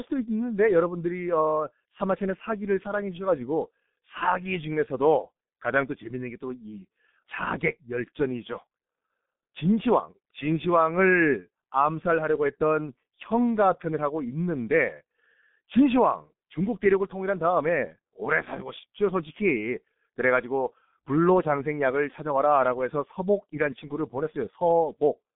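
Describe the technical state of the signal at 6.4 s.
At 6.4 s the speech carries G.723.1 codec damage, present across the whole clip. Squeezed to about 6.3 kbit/s, with a slowly refreshed voice model and nothing above 3.7 kHz, the band of 150 Hz to 3.6 kHz sounds muffled and hoarse, with smeared consonants.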